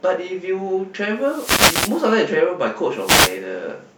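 A speech recording broken twice by bursts of hissing static, from 1.18 to 2.14 s and again from 2.95 to 3.42 s, each a swish of noise that swells over the voice and then clears. These are wireless microphone noise hits. The analogue FM radio link fades when reflected signals cancel the direct one, so the receiver's own noise rises into the audio, with the first dropout lasting nearly a second and the second about half as long.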